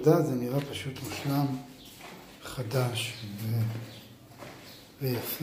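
Nothing here catches the ear as a technical fault; it simply runs its course without any glitch worth pointing out.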